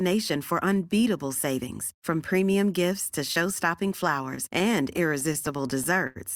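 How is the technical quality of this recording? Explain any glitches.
The recording is clean until the last two seconds, where it breaks into repeated stalls (stutter) from 4.35 to 6.17 s. Fourteen times, incoming audio arrived too slowly, the playback buffer ran dry, and the last sound was stretched to bridge each gap, the longest 84 ms, about 221 ms in total, roughly 12% of that stretch. Nothing is lost, but the speech drags and hiccups. A spectrogram shows brief smeared, frozen bands, and the waveform shows repeated cycles fading during the longer waits.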